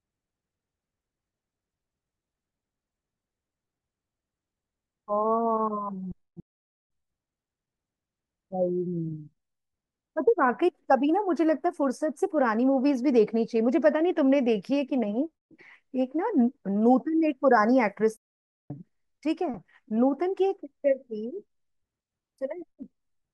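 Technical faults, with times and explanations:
6.40 to 6.90 s: playback stall, the speech cuts to silence for about half a second mid-flow, then resumes; likely the player ran short of data or its thread was blocked.
18.17 to 18.70 s: playback stall, a second silent gap of about 0.53 s interrupts the speech before it carries on, again likely from a starved or blocked playback path.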